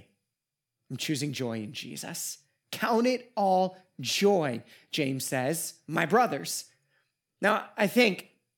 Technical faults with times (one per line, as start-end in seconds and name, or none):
none